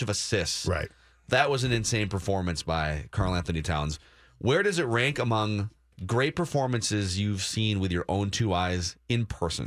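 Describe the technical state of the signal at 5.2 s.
At 5.2 s the speech signal is intact, with no audible fault at that moment.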